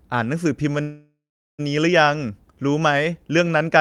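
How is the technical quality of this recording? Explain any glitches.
There is one glitch. From 0.81 to 1.61 s, a call audio freeze stretches the last sound into a fading buzz or hiss, then about 0.42 s of silence. This is likely a stalled jitter buffer. Unlike a dropout, the speech resumes exactly where it stopped, about 0.77 s late, with nothing missing.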